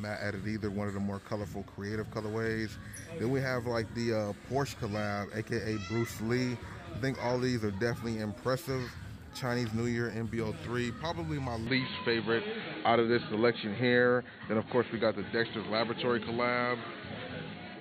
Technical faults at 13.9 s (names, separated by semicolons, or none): input switched to a poorer device